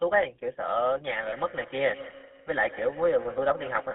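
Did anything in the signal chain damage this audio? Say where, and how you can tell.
Yes. The codec stage did. GSM full-rate coding runs throughout. The sound is buzzy and gravelly, band-limited to 250 Hz to 3.5 kHz, which fits 13 kbps GSM.

At the network stage, two lost GSM frames appear at 1.28 to 1.33 s. For about 40 ms, the last good frame is repeated, giving a brief rough, metallic ring.

Call processing shows feedback echo between two devices from 1.11 s to the end. Repeats return roughly every 150 ms, at about 16 dB below the speech. Another device's microphone is re-sending the played audio.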